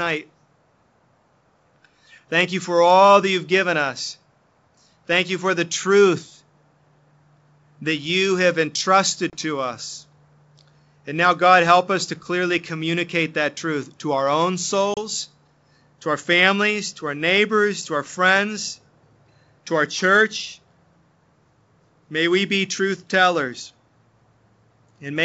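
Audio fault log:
9.30–9.35 s and 14.94–14.98 s, packet loss on an ADPCM call: about 30 ms of audio drops out, a few packets' worth, first just before "to us", then just after "truth to our own". Each gap shows as a hard-edged flat stretch in the waveform and a clean vertical blank across the wideband spectrogram. The gap is filled with silence, and the decoder's adaptive predictor and step size no longer match the sender's, so the sound resumes while the decoder is still out of step and must regain sync.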